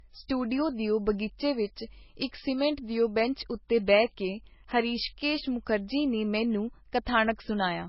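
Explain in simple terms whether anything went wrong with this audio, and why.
Yes: throughout, the speech sounds dull, with nothing above 5.5 kHz. This is likely low-bitrate audio saved at a high bitrate, so the lost detail stays lost.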